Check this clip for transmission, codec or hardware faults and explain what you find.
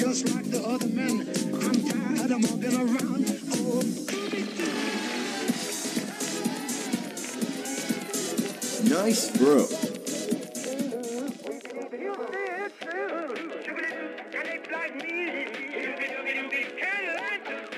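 No fault can be heard anywhere in the audio. There is nothing here to explain or correct.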